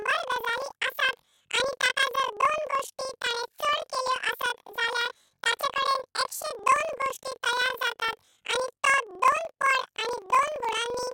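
From start to finish, planar audio read as interleaved: each roughly 43 ms block, likely 2048 samples, plays twice at double speed, so the speech sits an octave high with a 23.4 Hz flutter.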